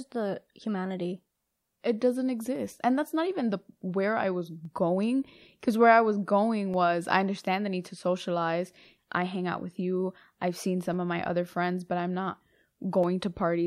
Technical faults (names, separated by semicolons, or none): clock drift buffer slips